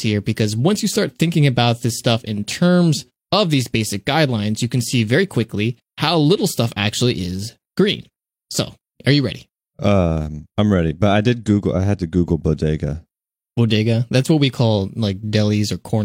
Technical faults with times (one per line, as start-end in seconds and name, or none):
none